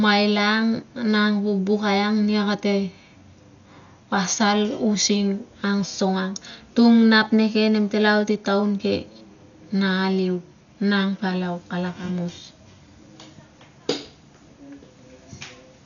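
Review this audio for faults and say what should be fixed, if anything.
Throughout the speech there is heavy damage, likely from Dolby Digital compression. Nothing reaches above 7 kHz. A dull, rough flutter around voiced tones fits a bitrate near 48 kbps, where many frequency lines carry only dither noise. A spectrogram shows a hard ceiling at 7 kHz and speckled, grainy harmonics. To prevent it, encode at a much higher bitrate or keep the uncompressed original.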